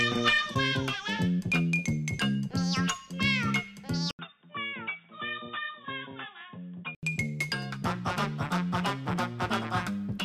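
At 4.11 s an 80 ms gap precedes duller, quieter audio capped at 3.8 kHz with new hiss until 7.03 s, likely an input switched to a poorer device.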